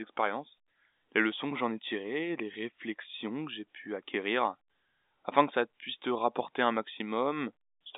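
Nothing is technically wrong with this speech clip, which comes through a G.711 telephone line with its band ending near 3.8 kHz.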